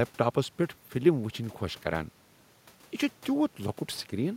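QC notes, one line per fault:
No faults: the signal is continuous and steady, with the room's own background noise sitting about 33 dB below the speech.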